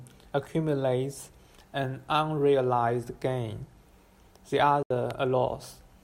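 A short stretch of speech cuts out at 4.83 s and comes back at 4.91 s, leaving a hole of roughly 70 to 80 ms of silence. When the audio returns, it has moved on rather than picking up where it stopped, so that slice is simply missing. This is a Bluetooth dropout, likely caused by audio packets arriving at the headphones too late and being discarded. The length of the gap fits a handful of lost packets.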